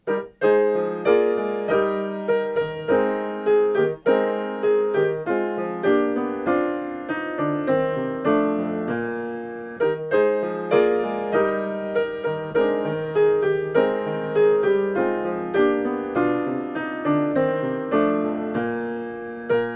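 No faults to report: nothing on the recording breaks, drops or distorts at any point.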